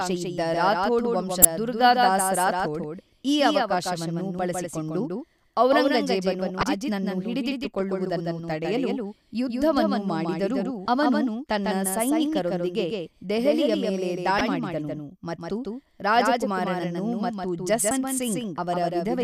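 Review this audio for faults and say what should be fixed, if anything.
The whole speech track is doubled. A second full-band copy runs roughly 150 ms behind the original, about 5 dB quieter. It has no decay or room colour, so it sounds like a hard slapback rather than an echo. The likely cause is the same signal reaching the mix twice, through a second, slower capture path or an edit that stacks two offset copies. To prevent it, route each source through only one path into the recording.

Damaged data in a compressed stream causes five short glitches: 1.42 to 1.45 s, 6.60 to 6.63 s, 10.85 to 10.88 s, 14.38 to 14.41 s and 17.88 to 17.91 s. The third falls just after "ಹಿಡಿದಿಟ್ಟುಕೊಳ್ಳುವುದನ್ನು ತಡೆಯಲು ಯುದ್ಧವನ್ನು ಮಾಡಿದರೂ". Each is a brief blip of about 30 ms. Corrupted bytes make the decoder misread frames and lose sync. It then hunts for the next frame header. To prevent it, transfer and store the file with checksums.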